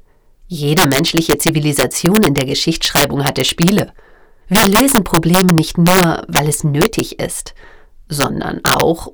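Integer overflow runs through the whole clip. The signal was pushed about 9 dB beyond the integer range, and instead of being limited, each sample past the ceiling wrapped around to the opposite extreme. Only around one percent of samples exceed the limit, so the damage is confined to the loudest peaks. There it is severe: each overflowing peak jumps across the full range, producing abrupt, violent cracks far harsher than ordinary clipping.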